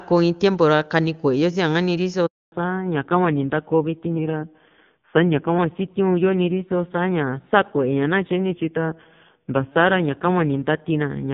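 Right at 2.26 s there's a handover gap. The call gets passed between networks, no speech frames make it through, and the audio just drops out for 260 ms until the new link picks up at 2.52 s.

From 2.52 s to the end there's a fallback to narrowband. The clean HD Voice sound from the opening is gone, nothing survives above 4 kHz, and the voice goes dull and a bit rough, which fits a low-rate narrowband mode of around 6 kbit/s.

Then two drift correction steps show up, from 4.18 to 5.59 s and again from 8.52 to 9.72 s. Each time the playback slows by about 5.9% and the pitch sags 104 cents, roughly a semitone, before snapping back. That's likely clock-matching software nudging its buffer.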